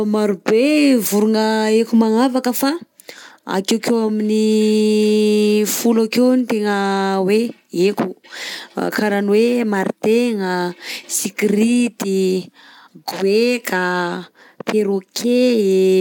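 Speech recording, with no technical faults to report.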